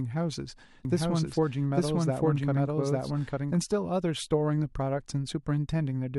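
A speech recording with a doubled audio track from 0.85 s to 3.55 s. A second copy of the sound runs about one second behind the first, at roughly the same level. It is full-band and dry, with no decay or room colour, so it is not an echo. It cuts in and out abruptly at those times. The likely cause is the signal being captured again through a slower path, or an edit leaving two offset copies.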